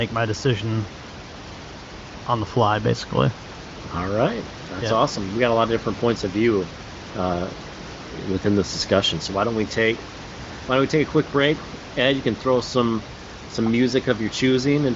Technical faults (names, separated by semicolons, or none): none